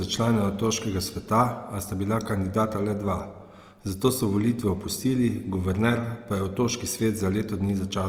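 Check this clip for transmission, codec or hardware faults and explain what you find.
One codec fault is present, and it lasts the whole clip. Opus compression is heard throughout. The likely cause is Opus music-mode coding at a low bitrate, around 24 kbps. Short of bits, it fills bands with folded or noise content. The speech sounds rough and grainy. The bandwidth stays full, up to about 20.2 kHz.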